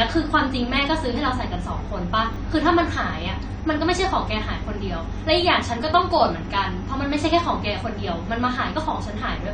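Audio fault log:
throughout: AAC compression, likely from a low-rate AAC-LC encode, with damage that fits about 32 kbps. The encoder lowers its cut-off at this low rate, so nothing remains above 9 kHz and the speech sounds dull and smeared, with a plainly audible warbling fizz on sibilants.
2.34 to 2.36 s: chunks out of order. A 10 ms chunk of audio was written one chunk late, so it plays after the chunk meant to follow it. Nothing is lost, but the swapped order leaves three hard joins, heard as a brief jumbled moment.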